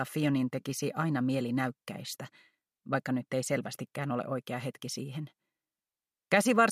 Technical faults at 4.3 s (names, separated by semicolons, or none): none